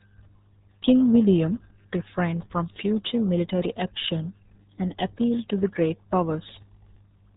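From start to finish the speech has gone through the RealAudio 14.4 codec. Nothing above about 3.8 kHz survives, and the heavy gargly, muffled smearing points to a very low bitrate, around 8 kbit/s, squeezing everything through a dial-up-era speech coder.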